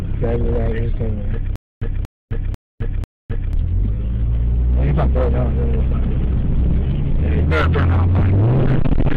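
From 1.56 to 3.53 s there's a stutter with silent gaps: a 235 ms burst repeats four times, each followed by about 260 ms of dead silence, likely a stalled stream replaying its last fragment.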